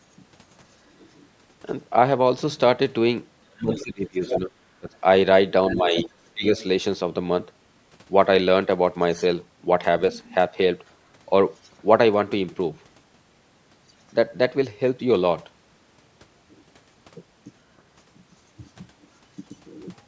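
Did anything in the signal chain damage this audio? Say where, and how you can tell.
Yes. Speech suppressed in double talk at 3.52 to 4.89 s and 5.71 to 6.44 s, in the call processing stage: the speech dips by up to about 20 dB while a second voice overlaps. This is likely the echo canceller, unable to separate the talker from the loudspeaker echo, turning both down.

The other side's voice is leaking through at 3.75 to 4.4 s and 5.67 to 6.64 s, about 10 dB below the speech, with faint scraps at 10.12 to 10.35 s, 10.88 to 10.92 s, 11.63 to 11.7 s and 13.88 to 13.93 s. This is likely residual loudspeaker echo the canceller failed to remove.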